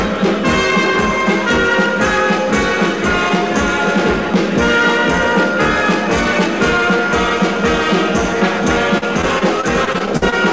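Repeated packet loss (robotic sound) runs from 8.98 to 10.34 s, near the end of the clip. Around ten short holes open up in the stream, the longest about 48 ms. Each is papered over by stretching the preceding sound, so roughly a sixth of that stretch is synthetic fill. The result is a choppy stutter with fragments missing, heard over the call path's band limit, which leaves nothing above 8 kHz.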